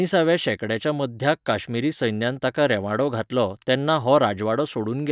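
No technical faults can be heard at any point in this speech recording. Nothing in the audio calls for a timestamp or a diagnosis.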